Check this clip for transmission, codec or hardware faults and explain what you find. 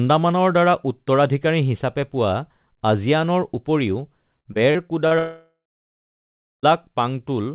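Two transmission faults appear in the second half, over a telephone-band path with nothing above 4 kHz, which points to G.711 mu-law at 64 kbps.

Repeated packet loss (robotic sound), 4.40 to 5.14 s: four short gaps, the longest 49 ms, are filled by repeating prior audio, so about 22% of the stretch sounds choppy and robotic.

From 5.19 to 6.66 s, a likely long network dropout: the last sound is briefly extended and fades, then roughly a second of silence passes before audio resumes with that part missing.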